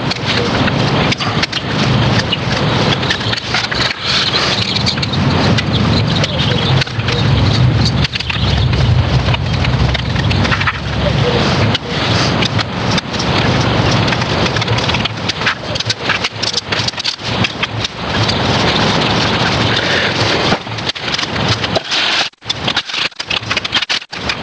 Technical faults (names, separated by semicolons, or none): gain pumping